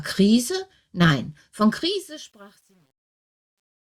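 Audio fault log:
1.6–3.96 s truncation distortion on a fade: undithered steps, consistent with about 10 bits, make the fade-out gritty, worst from 2.21 s; waveform shows square stairs.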